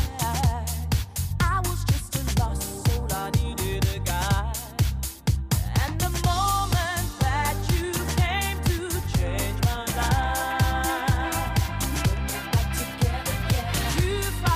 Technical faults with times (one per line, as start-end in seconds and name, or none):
none